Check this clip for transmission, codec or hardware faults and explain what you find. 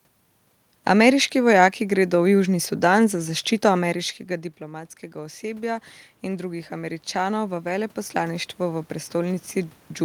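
One fault is present, an automatic gain rising.

From 1.93 s to the end, the speech and the room noise behind it swell together, growing steadily louder. The automatic gain control judged the input too quiet and kept raising its gain gradually, lifting everything it captured. The level change around 3.5 s sounds like the talker moving relative to the microphone.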